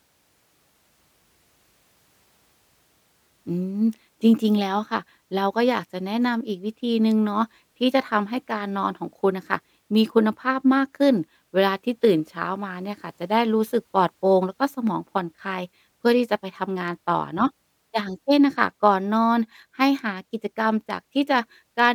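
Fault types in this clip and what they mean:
No technical fault can be heard anywhere in this speech clip. There is nothing to list under any heading here.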